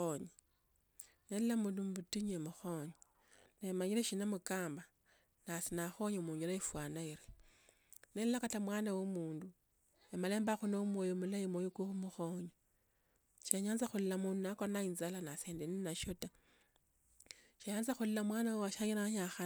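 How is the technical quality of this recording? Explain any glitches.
No technical glitches turn up in the recording, as the signal stays steady and continuous throughout with nothing interrupting or disturbing it.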